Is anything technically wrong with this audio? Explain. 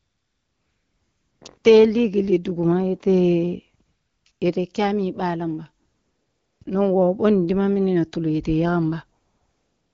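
Yes. AMR comfort noise replaces the real background at 0 to 1.41, 1.57 to 1.63, 3.85 to 4.25, 4.31 to 4.41, 5.85 to 6.61, 6.63 to 6.65 and 9.19 to 9.94 s. The phone judged the talker silent and stopped sending speech. The receiver filled each gap with smooth synthetic noise that switches abruptly in and out.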